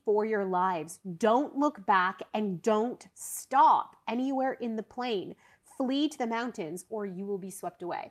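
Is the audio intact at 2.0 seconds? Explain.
Yes, the speech at 2.0 seconds is intact, with no audible fault at that moment.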